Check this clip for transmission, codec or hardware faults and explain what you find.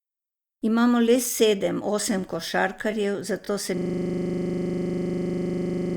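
There is one fault, a system hang loop. It starts at 3.78 s, just after "osem košarkarjev zato se", and lasts to the end of the clip. The computer or driver stopped supplying new audio, but the sound hardware kept replaying its ring buffer. A 40 ms piece of speech repeats exactly, about 55 times. At 25 repeats per second, the speech gives way to a steady, rough buzz that never resolves.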